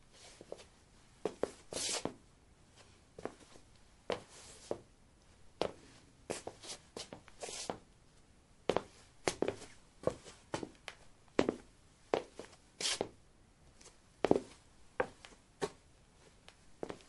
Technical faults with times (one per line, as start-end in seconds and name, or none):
0.00-17.09 MP3 compression
9.25-9.27 pre-echo